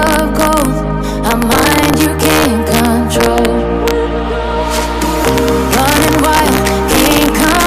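Integer overflow runs through the whole clip: with the signal pushed about 6 dB too hot, the few peaks over the limit, around half a percent of samples, wrap to the opposite extreme rather than flattening, giving violent cracks far sharper than clipping's dull buzz.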